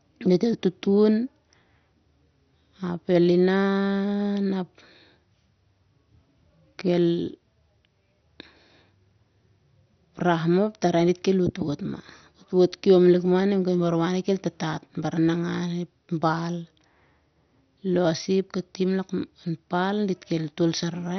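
Speech, dull and gurgling throughout, with nothing above 6.2 kHz and a coarse, granular flicker, likely heavy MP2 compression shutting off upper sub-bands, which fits a 48 kbps bitrate.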